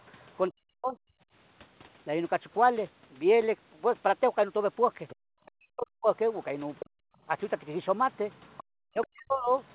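Speech recorded on a call, band-limited to 4 kHz, which points to a narrowband telephone codec such as G.711 A-law. The other side's voice leaks through faintly at 0.00–0.36 s (about 35 dB below the talker), more clearly at 5.08–5.51 s (about 25 dB below), and from 6.79 s to the end (about 20 dB below). This is likely residual loudspeaker echo that the echo canceller failed to remove. Speech is suppressed in double talk at 0.49–1.15 s, 5.55–6.98 s and 8.80–9.51 s. The talker's voice drops by as much as roughly 40 dB over around half a second to most of a second in each span, likely because the canceller could not separate the talker from the echo and attenuated both. At 5.15–5.27 s the background is gated by the echo canceller: the room sound falls by about 40 dB for about a tenth of a second while the loudspeaker plays, then returns.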